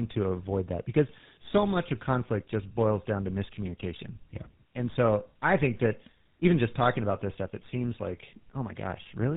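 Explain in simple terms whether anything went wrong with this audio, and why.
Yes, something went wrong, and it lasts the whole clip. The speech sounds rough, muffled and warbly from start to finish, with nothing above about 3.8 kHz. This is tandem speech coding: the call passed through more than one phone network, and each one squeezed the sound with its own speech codec. The character points to two rounds of the mobile-phone GSM full rate codec, the second working on an already degraded copy, so the damage piled up.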